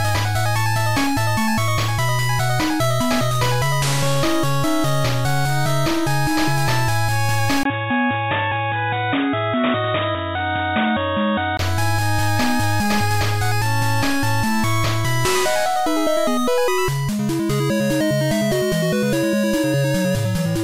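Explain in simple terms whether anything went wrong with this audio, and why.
From 7.63 to 11.59 seconds the sound turns dull and boxy, with nothing above about 3.8 kHz, then clears up again. This is most likely an input switched to a poorer device. A brief gap of about 20 ms at 7.63 s and a faint new background noise mark a different microphone taking over. A simple filter or codec change wouldn't bring its own noise, and loudness stays about the same throughout.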